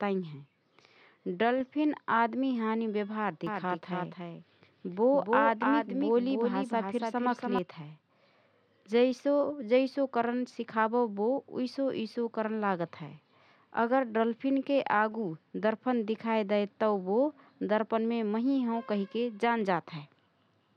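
From 3.47 s to 7.59 s the speech is heard twice. A doubled audio track appears: a second full-band copy trails the original by roughly 0.3 s, a few decibels quieter. It carries no reverb tail or room colour. It cuts in and out abruptly at both ends. The likely cause is the same signal being captured again through a slower path, so two copies run out of step.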